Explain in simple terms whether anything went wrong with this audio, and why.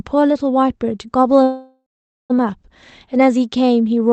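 At 1.43 seconds the sound suddenly stops moving forward. The last bit of sound drags on as a fading buzz, then goes quiet for about half a second, and at 2.32 seconds the speech picks up exactly where it left off. This is a call audio freeze. The likely cause is that data got held up on its way across the network, so the receiver ran out of sound to play and stretched what it had. Nothing is lost, but the rest of the clip arrives almost a second late.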